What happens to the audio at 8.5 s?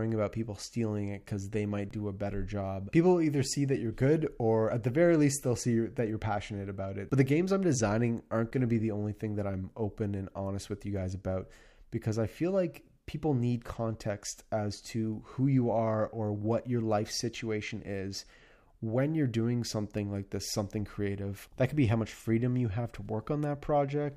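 At 8.51 s there is an underrun with held sample. The output buffer ran dry for roughly 15 ms, and the converter held its last value until data arrived again, so the waveform goes flat and the sound simply stops without much of a click. Because about 15 ms of live audio was lost during the hold, the resumed signal does not line up with where it stopped.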